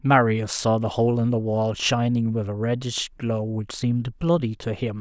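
No technical faults can be heard anywhere here.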